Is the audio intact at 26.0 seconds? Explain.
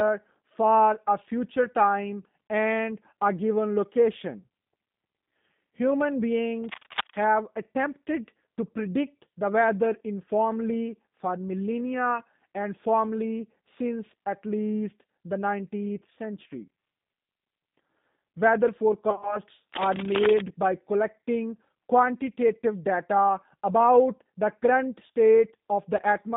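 No. At 25.97 s a short burst of VoIP packet loss, concealed by the speech codec, breaks the audio until 26.01 s. About 20 ms of the stream is missing, which fits two lost 10 ms frames. The decoder fills the gap by repeating its last pitch and filter at falling gain. The sound smears into a brief buzzy tone or coloured noise that fades. The sound that follows stays weak or distorted as the decoder recovers.

The whole clip also carries G.729 codec damage, and it is plainly audible at this moment too. The band is cut to roughly 150 Hz to 3.7 kHz, so there is no air or sparkle. The speech is rebuilt from a vocal tract filter, a pitch predictor and a few pulses per frame. That gives it a rough, slightly synthetic edge. This fits an 8 kbit/s G.729A codec.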